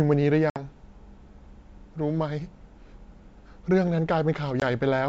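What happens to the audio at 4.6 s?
At 4.60 to 4.63 s the speech drops into a short, hard-edged hole of silence, about 20 ms long, and then comes back with a brief roughness before settling within a few tens of milliseconds. That is packet loss on an ADPCM call, here roughly one packet on the G.722 wideband stream at 64 kbit/s. The missing audio is replaced by silence, and the decoder's adaptive predictor and step size drift away from the sender's until they catch up again.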